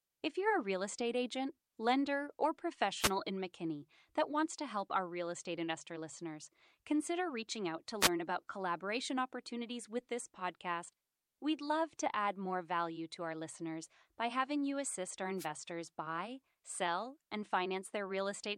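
Wireless microphone noise hits break into this speech recording at 2.99 to 3.11 s, 8.00 to 8.09 s and 15.38 to 15.47 s. Each is a brief swish of static lasting roughly a tenth of a second. The analogue FM radio link fades as reflected signals cancel the direct one, so receiver noise surges up before the signal recovers. Pre-echo appears at 11.97 s: a hiss, about 11 dB above the surrounding floor, leads a sharp attack by 16 ms and softens its edge. A transform codec spread the quantisation noise meant for the loud onset across its whole block, including the quiet moment before it. The spread fits a window of about 26 ms, and the smearing suggests the coder never switched to short blocks to contain it.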